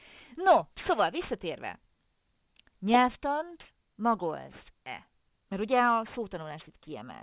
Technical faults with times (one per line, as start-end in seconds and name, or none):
0.00-7.23 aliasing